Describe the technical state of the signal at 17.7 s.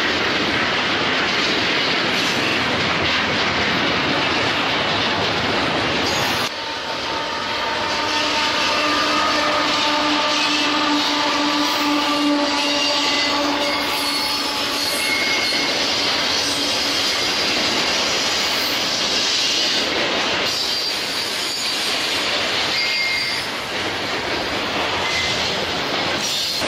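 At 17.7 s the signal is intact, with no dropout, clipping, glitch or other technical fault present.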